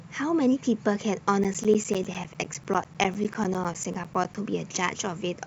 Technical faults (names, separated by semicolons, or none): periodic USB or driver dropouts